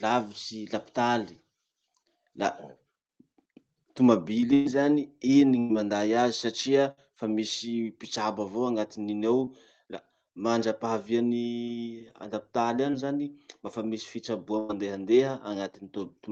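Bursts of packet loss occur at 4.53 to 4.67 s, 5.59 to 5.71 s, 6.91 to 6.99 s and 14.59 to 14.71 s. Each gap of 60 to 120 ms is bridged by a fading continuation of the last sound, which shows as a smeared, decaying band on the spectrogram before the audio resumes further along.

Short concealed packet losses at 9.45 to 9.49 s and 12.91 to 12.95 s each drop about 20 ms. They are heard as a brief smear or wobble and appear as a thin blurred vertical slice.

The Opus call path leaves an empty band above 8 kHz throughout.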